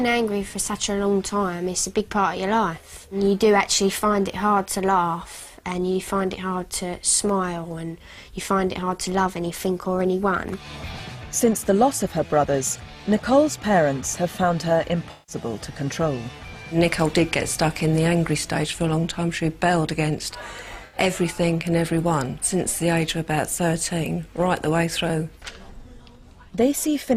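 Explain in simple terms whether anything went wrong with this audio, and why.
Two short dropouts show AAC frame loss with concealment: one from 15.11 to 15.36 s and another from 20.85 to 20.97 s. Pieces of the compressed stream went missing, and the decoder covered each gap by reusing the last good sound with its detail scrambled. That patch sounds smeared and noisy rather than silent. The first gap is longer, consistent with roughly eight lost frames, and the second with about four.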